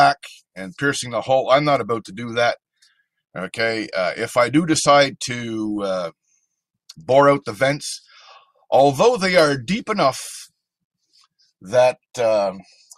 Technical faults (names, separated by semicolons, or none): none